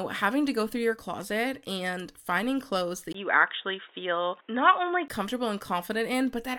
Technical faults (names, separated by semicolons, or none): input switched to a poorer device